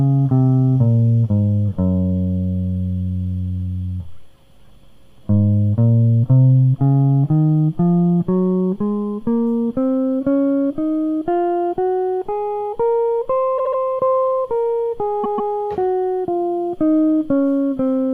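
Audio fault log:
13.57–13.79 s, repeated frames: a 72 ms block of music is sent three extra times, so it stutters and gains 216 ms.
15.23–15.52 s, repeated frames: a 144 ms block, likely a run of several short frames, plays twice more, a slower stutter, adding 288 ms.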